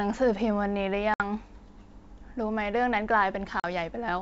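At 1.14 to 1.23 s and again at 3.60 to 3.65 s, packet loss on an ADPCM call drops about 60 ms, then 40 ms, to silence: flat, hard-edged gaps in waveform and spectrogram. The resynchronising decoder then gives slight distortion before settling.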